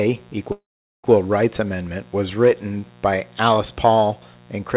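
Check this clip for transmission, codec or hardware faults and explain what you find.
Two faults here: a buzz running under the whole clip, and one long gap near the start.

Mains buzz runs throughout: switching spikes twice per 60 Hz cycle leak in and stack up harmonics, giving a steady raspy buzz roughly 30 dB under the speech.

From 0.52 to 1.06 s there's a long network dropout, likely. About half a second never arrived. The tail fades into a brief buzz or hiss, then near-silence, and the speech resumes with that chunk missing. The call path also cuts everything above 4 kHz.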